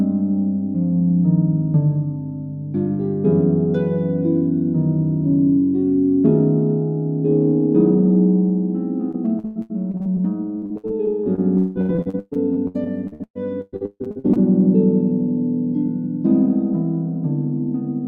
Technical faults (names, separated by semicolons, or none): repeated packet loss (robotic sound)